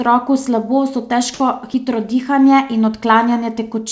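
At 3.92 s, right at the very end of the speech, the sound drops out for about 1 ms. A sender-side voice detector likely judged the tail as background and dropped it. Comfort noise fills the gap. Over the call path, nothing above 8 kHz survives.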